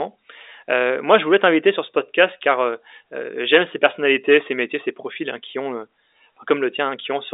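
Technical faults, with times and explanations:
No technical faults, so there are no times or explanations to give.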